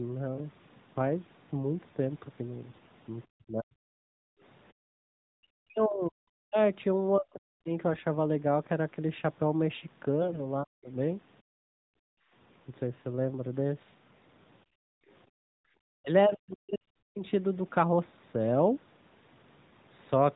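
From 2.70 to 2.93 s the speech turns hoarse and gargly while keeping roughly its pitch and level. These are AMR bit errors: on a weak link, a few percent of the less protected bits in the codec frames arrived flipped, so the excitation pulses and fine pitch, gain and spectral values decode wrongly.

Between 3.30 and 3.86 s, 5.35 and 6.57 s, and 7.17 and 7.70 s, the talker's speech dips very deeply, by tens of decibels, or cuts out in pieces. This is speech suppressed in double talk, likely because the echo canceller, facing both sides talking at once, could not separate the talker from loudspeaker echo and turned everything down.

The same scratchy AMR bit-error sound returns from 10.22 to 10.40 s, this time with a slightly higher share of corrupted bits. It is followed at 10.63 to 10.90 s by another short, deep double-talk suppression of the speech.

From 11.42 to 12.32 s the room background drops away by about 37 dB and then comes back. 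This is background gated by the echo canceller, which clamped the microphone hard while the loudspeaker was playing and released it afterwards. All of this sits inside narrowband AMR-NB audio with nothing above 4 kHz, and the light codec coloration fits the 12.2 kbps mode.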